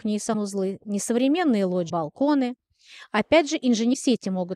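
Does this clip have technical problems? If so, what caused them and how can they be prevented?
Yes. Brief glitches of about 28 ms occur at 0.33–0.35 s, 1.89–1.91 s and 3.93–3.95 s. The likely cause is a broken MP3 bit reservoir: frames near 24 ms were cut, so following frames decoded borrowed data wrongly. Cut MP3 streams only at frame boundaries that keep the reservoir data intact, or edit before encoding.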